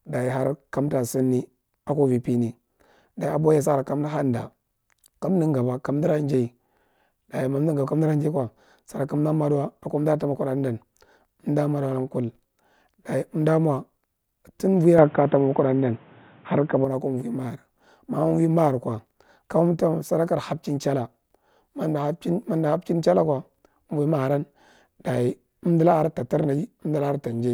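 A speech clip with one fault. From 14.98 s to 16.85 s the sound turns dull and boxy. Nothing above 3.8 kHz comes through, so the top of the sound vanishes. A new background noise appears, some 30 dB under the speech. The level shifts by around 5 dB. The change happens with no silence at the switch. The likely cause is the input switching to a poorer device, such as another microphone or a headset's call profile.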